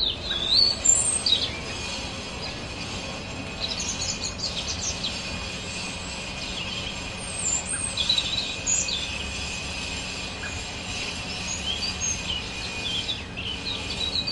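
At 5.42 s and again at 12.41 s, compressed frames are skipped: about two 23.2 ms frames drop, so the sound jumps ahead roughly 50 ms.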